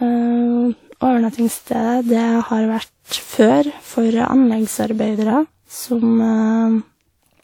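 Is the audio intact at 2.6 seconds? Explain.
No. At 2.6 seconds the speech carries generation loss, present throughout the clip. It swirls and sounds hollow, consonant attacks are smeared, and nothing sits above about 19.3 kHz. The likely cause is repeated lossy re-encoding, around seven passes through a WMA-style codec near 96 kbit/s, each requantising on a shifted frame grid so the noise and spectral holes pile up. A single encode at that rate would sound far cleaner than this.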